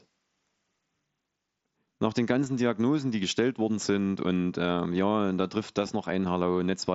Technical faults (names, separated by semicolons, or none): concealed Bluetooth headset packet loss